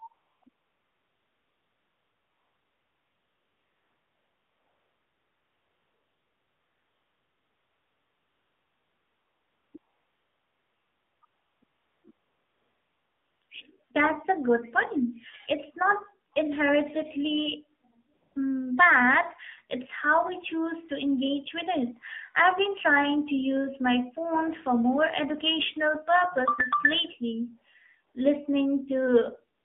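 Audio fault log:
Throughout: AMR narrowband mobile codec, at 7.4 kbps with the line passing only about 200 Hz to 3.6 kHz. Everything above 4 kHz is gone, so the speech sounds dull and boxed in. The codec rebuilds each 20 ms frame from a vocal-tract filter excited by a handful of pulses, and at this low rate there are too few pulses to follow the real waveform. The result is a clearly buzzy, synthetic quality, with any background turning into a swirling warble.
0.14 s to 29.64 s: AMR comfort noise, in eleven gaps where the sender judged the talker silent and stopped transmitting speech frames. The longest runs from 0.50 s to 9.74 s. A dense cluster sits between 9.78 s and 13.90 s, a further gap at 18.14 to 18.36 s, and a last one in the final 55 ms. The receiver fills each gap with smooth, steady synthetic noise built from a coarse level-and-spectrum description, so the real background drops out and the noise switches audibly in and out.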